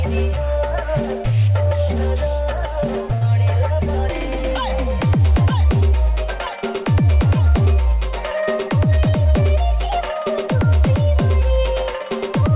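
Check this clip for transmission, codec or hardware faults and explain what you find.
Two jitter-buffer faults stand out, a stall and a later catch-up, heard through a narrowband call path whose content stops at 4 kHz, which fits G.711 mu-law.

Short stall from a late packet, 3.14 to 3.23 s: a packet arrived late and the jitter buffer ran dry, so the receiver stretched the last sound by 70 ms until the data came in, then resumed from the same point. Nothing is lost, but the sound hangs unnaturally, with a slight buzz or dip, and the delay grows by 70 ms.

Jitter buffer speed-up, 8.90 to 9.43 s: the buffer was holding more audio than its target, so the receiver cut out short pitch-period-length pieces over and over, removing roughly 70 ms in total. Playback runs at 110% speed with the pitch unchanged, so this half-second sounds hurried and rushed compared with the audio around it.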